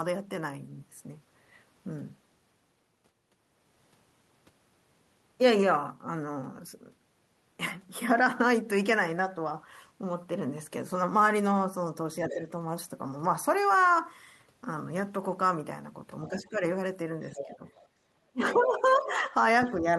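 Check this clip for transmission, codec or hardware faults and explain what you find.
Two echo-canceller faults turn up, both in the back half of the speech.

Speech suppressed in double talk hits at 12.21 to 12.47 s, 16.28 to 16.63 s, 17.29 to 17.62 s, and from 18.31 s to the end. The talker dips by about 10 dB, and by about 15 dB in that last stretch. It's likely the canceller couldn't tell the talker from loudspeaker echo when both sides overlapped, so it ducked everything.

The other side's voice leaking through shows up at 12.26 to 12.34 s, 17.26 to 17.82 s, 18.43 to 19.06 s and 19.66 to 19.71 s. It's a faint second voice, about 10 dB below the talker at its loudest and down to about 30 dB below at the end. That's likely loudspeaker playback the canceller didn't fully strip from the mic.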